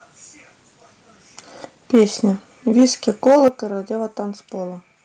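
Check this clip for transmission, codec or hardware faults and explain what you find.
Two hardware-side faults show up in the speech here, both around the 3 s mark.

From 2.78 to 3.48 s there's microphone overload: peaks push about 4 dB past the converter's limit, likely from input gain set too high, so a few percent of samples get flattened into a harsh crackle.

At 3.48 s the microphone volume steps down by about 8 dB. Voice and background drop together, likely the call software cutting input gain after that clipping.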